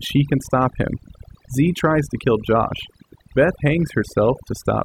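A speech recording runs with overdone noise removal from start to finish. The noise reduction was set too hard. It cuts frequency bands near its noise estimate, taking quiet voice detail too. The background drops and breaks up into twinkling specks.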